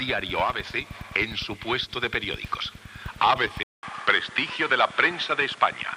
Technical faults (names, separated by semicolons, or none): input switched to a poorer device